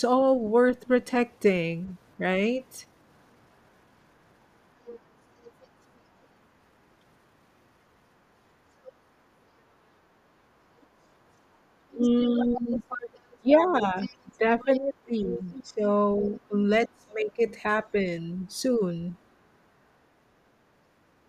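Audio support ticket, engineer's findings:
Other side's voice leaking through: second voice audible under the talker at 1.86–2.6 s, 4.84–6.27 s, 8.83–8.92 s, 10.81–10.86 s, 11.91–16.4 s, 17.31–17.51 s and 18.46–19.24 s. Mostly faint, around 25 to 40 dB down. Strongest at 11.91–16.4 s, about 15 dB below the talker. Likely cause: far-end loudspeaker playback re-entering the mic, with the echo canceller leaving residual echo.

Speech suppressed in double talk: talker level ducks repeatedly from 11.94 to 17.41 s, about 3 s in total, with the deepest dips about 20 dB. Overlaps the heaviest leak, while both sides talk. Likely cause: echo canceller failing to separate near-end speech from loudspeaker echo and attenuating both.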